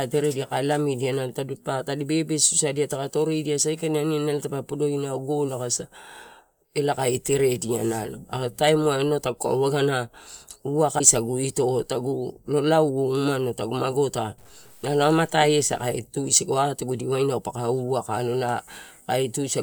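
At 10.98 to 11.01 s the speech skips ahead, which fits one lost 24 ms frame, likely a broken MP3 bit reservoir misreading borrowed data. From 14.38 to 15.97 s quiet passages turn gritty, with grain tracking the signal about 30 dB down, matching roughly 9-bit truncation, likely low bit depth without dither.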